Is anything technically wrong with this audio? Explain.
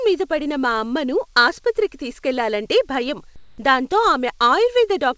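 Yes. From 3.36 to 3.58 s, right after "అమ్మను ఆసుపత్రికి తీసుకెళ్లాలంటే భయం", about 220 ms of background becomes comfort noise. The likely cause is discontinuous transmission: the sender stops during the pause, and the receiver synthesises roughly matched noise. This fits RFC 3389-style comfort noise. The room's texture turns into a flat, featureless hiss about 1 dB different in level. The background sits about 34 dB below the loud parts. On a spectrogram, the detailed background becomes a smooth, uniform band. On a waveform, it shows as an even, steady fuzz. Across the whole clip, the call path leaves nothing above 8 kHz, which points to a G.722 codec.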